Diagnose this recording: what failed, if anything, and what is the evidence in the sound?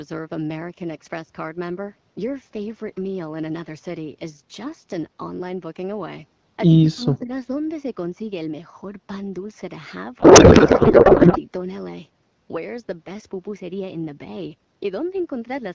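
At the call-processing stage, the speech level drops by about 15 dB between 6.81 and 7.3 s, for roughly 0.4 s in total. This is speech suppressed in double talk, likely the echo canceller ducking the talker while both sides spoke. The waveform envelope pinches inward, and the spectrogram fades.

At the codec stage, from 10.20 to 11.38 s, a codec payload misread replaces the speech with garbled, warbling noise that barely tracks it. The sound points to octet-aligned AMR frames being unpacked as bandwidth-efficient, which shifts every field. On a spectrogram, the clean harmonics of the AMR-WB stream turn into smeared, noisy energy.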